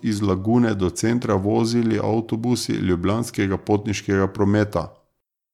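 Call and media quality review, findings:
No faults found in this speech clip.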